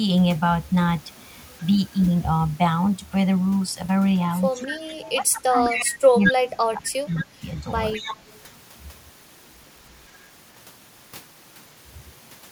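From 4.67 to 7.43 s the speech level repeatedly sinks, about 2 s in total and at worst by about 25 dB. This is speech suppressed in double talk, likely an echo canceller turning this talker down while the other side spoke. It differs from a dropout because the level dips and thins rather than cutting cleanly to silence.

Within and just after that stretch, a delayed copy of the voice trails 210 ms behind at 5.03–5.11, 5.64–5.91, 6.24–6.34, 7.12–7.24 and 7.58–8.43 s. It ranges from about 20 dB below the speech to equal level. This is echo leak, likely residue a loudspeaker-side canceller failed to remove. Its fixed 210 ms lag and scrappy, distinct repeats set it apart from room reverberation.

During the last echo, at 7.94 s, a brief double-talk dip of about 5 dB recurs.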